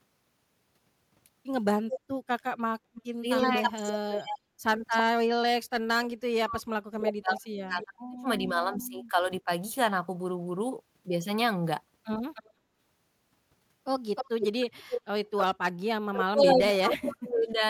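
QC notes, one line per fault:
1.9–8.83 s and 12.34–16.97 s, echo leak: a second copy of the speech trails the original by about a third of a second, 326 ms in the first stretch and 308 ms in the second. It sits only about 5 dB below the direct speech. The likely cause is a loudspeaker at the far end whose echo canceller failed to strip out what its microphone picked up, sending it back down the line.
3.2–9.5 s and 16.11–17.62 s, speech suppressed in double talk: the talker's level repeatedly caves in, in the deepest places by roughly 40 dB and 35 dB, so parts of the speech thin out or vanish. The affected spans add up to about 3 s in the first stretch and about 1.5 s in the second. Both sides were talking at once here, and the canceller likely could not tell the local talker from the returning echo, so it attenuated both together.
4.4–4.55 s and 12.55–12.78 s, background gated by the echo canceller: the room sound briefly sinks by about 11 dB for 150 ms and then by about 10 dB for 200 ms, then returns. 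Each dip is short. The canceller pulled the microphone down hard while the loudspeaker was playing and released it once that signal eased, taking the ambient bed with it for those moments.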